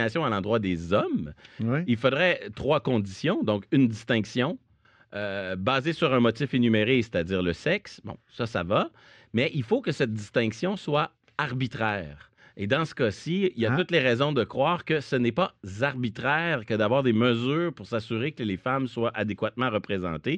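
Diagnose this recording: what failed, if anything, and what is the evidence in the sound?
Nothing in the speech stood out as a fault on listening, so there is no failure to point to at any stage.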